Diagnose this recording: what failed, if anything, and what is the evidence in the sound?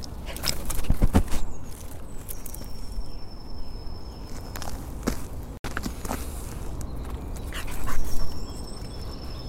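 Playback stage: at 5.57 s the sound cuts out for about 70 ms, resuming further along, likely a Bluetooth dropout from a few late packets.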